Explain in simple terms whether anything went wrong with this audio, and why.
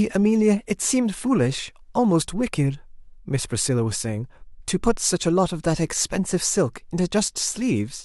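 Nothing went wrong that could be heard: listening to the whole recording, no problem stood out at any point.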